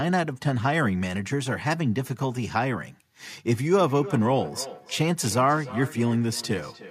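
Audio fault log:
3.45–6.90 s, feedback echo between two devices: the speech comes back as a distinct copy roughly every 300 ms, at most about 15 dB below the direct sound. A second device's playback re-enters a microphone whose echo canceller cannot remove it. Room reverberation would blur smoothly instead.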